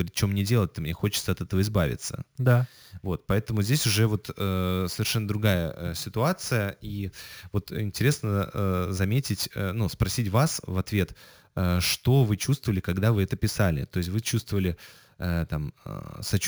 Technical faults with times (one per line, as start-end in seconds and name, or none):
0.00-16.47 imaging from sample-and-hold upsampling